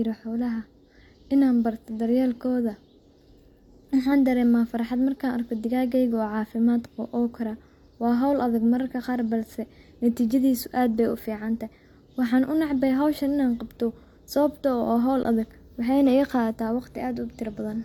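At 10.31 s, just before "aad bay", and at 15.23 s, before "adag waxaayna", an underrun with held sample briefly starves the output, freezing the waveform flat. The 1.2 ms hold loses about 1 ms of audio. The 17 ms hold loses around 20 ms of speech.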